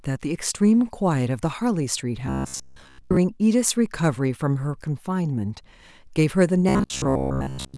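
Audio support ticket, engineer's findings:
Robotic sound from repeated short buffers, 2.27–3.17 s: speech collapses into a rigid metallic buzz near 66.9 Hz, roughly following the syllables. Waveform shows an identical cycle about 15 ms long repeating; spectrogram shows flat harmonic stripes at multiples of 66.9 Hz replacing natural pitch movement.

Same fault, 6.69–7.77 s: same 66.9 Hz buzz, most of the signal repeated rather than fresh. Likely cause: audio starved by late input buffers, with playback looping the last ~15 ms block to fill gaps.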